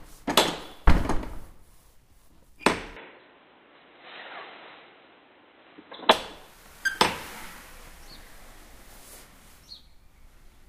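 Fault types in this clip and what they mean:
Input switched to a poorer device: from 2.97 to 6.11 s the sound abruptly loses everything above 4 kHz, shifts about 5 dB in level and picks up a new noise floor, then clears. This is likely a capture-device change, unlike a codec bandwidth drop, because level, tone and background noise shift together.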